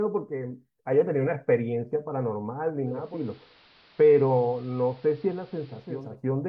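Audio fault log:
2.81–6.18 s, digital radio blending to analogue: the stream cross-fades over about 0.49 s to the AM broadcast and back, so the speech loses treble, drops about 2 dB and gains hiss some 30 dB down. A spectrogram shows a flat ceiling and a raised noise floor.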